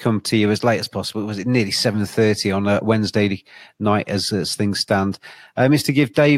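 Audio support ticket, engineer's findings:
Resampler restarted on every block: 50 Hz buzz riding the speech throughout, gone in pauses. 48 kHz to 44.1 kHz conversion run per 20 ms block (fits 960-sample input blocks) with no carried-over filter history, so each block edge picks up a small error. Waveform shows tiny discontinuities every 20 ms; spectrogram shows thin vertical lines every 20 ms, visible only where speech is present.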